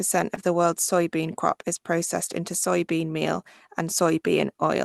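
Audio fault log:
0.35–0.39 s, short concealed packet loss: just before "the world's soybean crop", about 20 ms of audio arrived too late, so the receiver extended the preceding sound and blended back. It sounds like a brief smear, not the silent gap of a true dropout.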